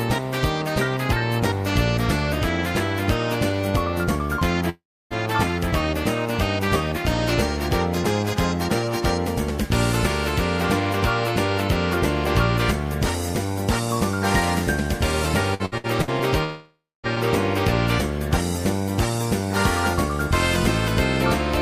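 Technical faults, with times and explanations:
4.69 to 5.13 s, long network dropout: the last sound is stretched into a brief fading buzz or hiss, then about 0.31 s of silence follows. The audio resumes with roughly 0.42 s missing. This is likely a network stall where the receiver ran out of incoming audio and padded the gap.
15.54 to 16.23 s, repeated packet loss (robotic sound): five short holes in quick succession, the longest 61 ms, are each patched by repeating the preceding sound. About 35% of this stretch is filler, so the audio turns choppy.
16.44 to 17.06 s, long network dropout: a fading continuation of the last sound gives way to about 0.25 s of silence. Playback then picks up again with roughly 0.6 s lost. The likely cause is again a stretch of audio that never reached the receiver.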